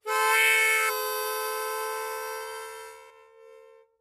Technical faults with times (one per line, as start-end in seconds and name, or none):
0.88-0.90 damaged data in a compressed stream
3.09 damaged data in a compressed stream